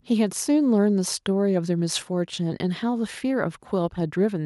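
Nothing in the speech stood out as a technical fault on listening.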